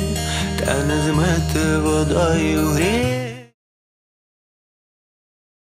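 No technical faults are present; the smooth fade-out beginning around 3 s and complete by 3.55 s is a deliberate edit.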